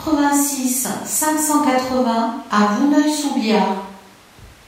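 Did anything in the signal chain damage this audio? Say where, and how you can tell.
No, nothing in the chain damaged this speech.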